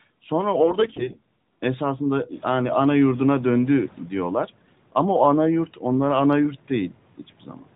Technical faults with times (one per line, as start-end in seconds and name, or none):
0.60-1.16 AMR bit errors
7.18-7.63 speech cut by the noise suppressor